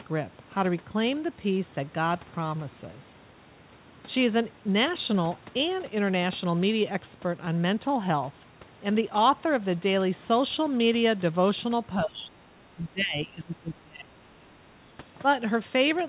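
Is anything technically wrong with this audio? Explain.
Yes. At 12.04–12.41 s, 12.70–14.29 s and 14.54–14.59 s the speech sinks by around 20 dB (the last dip about 10 dB), likely speech suppressed in double talk as the echo canceller ducked both talkers.

At 13.12–13.17 s a brief scrap of the other side's voice leaks through, roughly 10 dB under the speech, likely echo the canceller left behind. The band stops at 4 kHz, as expected from a G.711 mu-law call path at 64 kbps.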